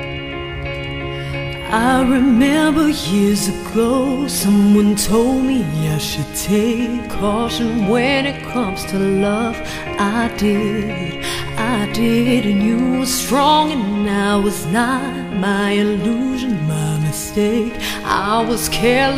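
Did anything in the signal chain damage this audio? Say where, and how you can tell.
No, nothing along the chain from capture to playback has left an audible mark on this audio. No stage stands out as having altered the sound.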